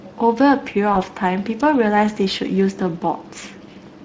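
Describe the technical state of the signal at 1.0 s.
A lost VoIP packet, concealed by the speech codec, spans 0.93 to 0.99 s. The decoder extrapolated a single missing 20 ms frame, so 1.0 s falls in the weak or distorted recovery tail. Throughout, Speex codec compression, which fits a setting around 20 kbps, leaves the speech plainly hoarse and noisy, with a noise-like upper band.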